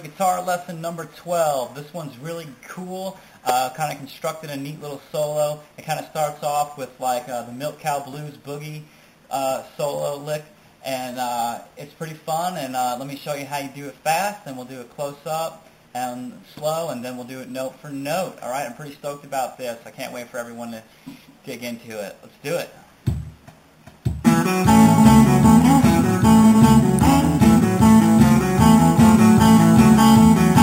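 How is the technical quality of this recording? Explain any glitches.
Two sharp snaps break into the recording, at 3.49 s and 26.99 s, and both sound like an electrical switching spike. A nearby switch, motor or static discharge likely arced, and the cable picked it up. The first peaks near -5 dBFS, the second near -10 dBFS. Each would show as a narrow vertical spike on the waveform and a thin full-height stripe on a spectrogram.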